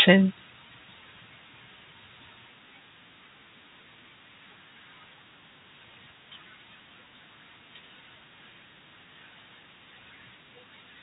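No technical faults are present in this speech recording, which carries the narrow, band-limited sound of G.711 telephone coding, with nothing above 4 kHz and at most a faint quantisation noise that follows the level of the speech.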